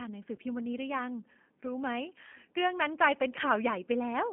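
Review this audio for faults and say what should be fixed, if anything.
The whole clip shows G.729 codec damage. The speech is confined to roughly 200 Hz to 3.4 kHz and carries a rough, synthetic edge from the pulse-based excitation, which fits 8 kbit/s G.729A. Unlike plain band-limiting, the harshness comes from the coarse rebuild rather than missing treble alone. A wideband codec such as G.722 or Opus would prevent it.

From 0.36 to 0.38 s there is VoIP packet loss concealed by the speech codec. About 20 ms, consistent with one packet, was lost, and the decoder stretched the last pitch and filter into a brief fading smear instead of the silent gap or click of an unconcealed dropout. Jitter buffering and forward error correction on the network path would prevent it.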